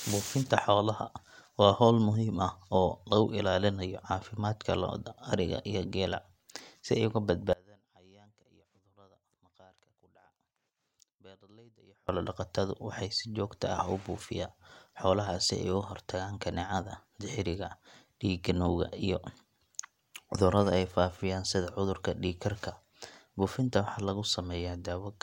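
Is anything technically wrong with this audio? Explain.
Yes. From 7.53 to 12.09 s the speech cuts out abruptly, and for about 4.6 s all that remains is a faint trace of the signal, roughly 30 dB below its normal level, before it snaps back mid-flow. This is an audio dropout to a faint residue. The likely cause is a momentary loss of the wanted feed while the downstream path stayed live, passing only a weak leak of the original until the connection recovered.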